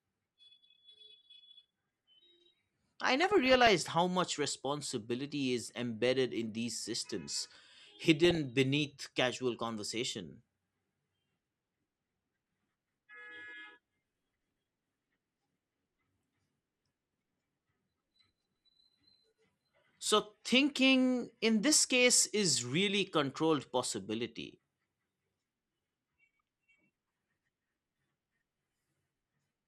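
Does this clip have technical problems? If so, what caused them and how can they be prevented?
Yes. Throughout the speech, the sound is dull and top-limited, with a granular, gurgling grain and upper detail that flickers in and out. This is most likely MP2 compression at a low rate, around 80 kbps. MPEG Layer II divides the spectrum into 32 sub-bands and shares out a bit budget among them. At this rate the upper bands keep getting switched off, and the bands that remain are coarsely quantised. To prevent it, broadcast or encode at a higher MP2 bitrate, or use a more efficient codec.

DAB burbling appears as short bursts at 1.31 s, from 3.21 to 3.68 s just before "how much responsibility is", from 8.24 to 8.38 s just before "beneath casual conversation", and at 24.52 s. The sound points to an error rate of a few tenths of a percent on a weak DAB signal. Some bit errors slipped past error correction into the MP2 data, corrupting samples, so individual sub-bands got short blips of noise. 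To prevent it, improve reception with a better-placed antenna or stronger signal, or use the stronger error protection of DAB+.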